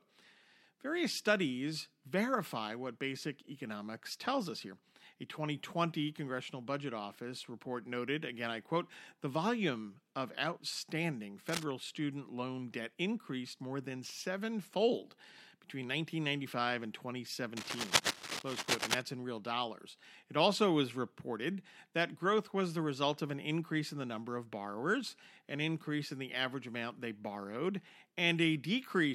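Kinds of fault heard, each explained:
Cable scratch noise: a rough, uneven rustling over the speech, briefly and a little quieter than it just after "the volume of outstanding", then for about 1.5 s at full speech level before "in real dollars"; likely a worn lead or connector shifting, its contact flickering.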